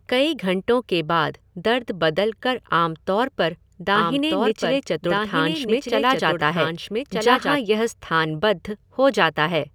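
From 3.95 to 7.57 s, after "कर आम तौर पर", a somewhat quieter, dry copy of the speech trails about one and a half seconds behind: a doubled audio track, likely from a second, slower capture path.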